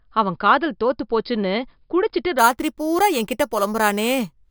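From 2.39 s to the end at 4.51 s, imaging from sample-and-hold upsampling adds a bright metallic fizz about 16 dB below the speech, strongest between 5.5 kHz and 11 kHz. It fits an 11 kHz signal raised to 44.1 kHz by repeating samples without smoothing. Unlike steady hiss, it tracks the speech's level, and its lowest image moves opposite to the pitch.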